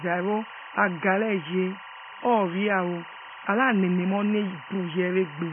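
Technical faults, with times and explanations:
Throughout, timecode bleed. A steady chirping warble sits behind the speech, roughly 15 dB below it. It flips between two pitches, near 1 kHz and 2 kHz. That is the sound of linear timecode leaking from a nearby track or cable. The code is a square wave whose pitch switches as its bits change. The pattern repeats at 23.976 frames per second, so the chirp has a fast, even rhythm.
Throughout, AAC compression. The speech is dull and smeared. Nothing is present above 3.4 kHz, so sibilants lose their edge. Sustained sounds carry a warbling, fizzy texture, and the damage is heavy. The likely cause is AAC-LC coding at a very low bitrate, around 16 kbps. At that rate the encoder cuts the top of the spectrum, leaves gaps between bands, and fills some of them with substitute noise.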